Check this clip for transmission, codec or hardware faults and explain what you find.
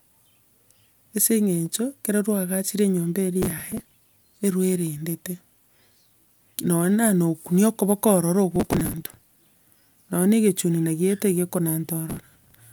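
Three bursts of processor overload crackle interrupt the speech, at 3.42 to 3.98 s, 8.56 to 9.31 s and 12.10 to 12.63 s. In each, the processor fell behind and missed dozens of buffer deadlines over a short stretch. The buffers appear to be only a few milliseconds long. Each missed buffer was skipped, leaving a tiny hard-edged gap in the speech. Run together, those gaps sound like gritty, tearing crackle over the voice, and it stops when the load eases.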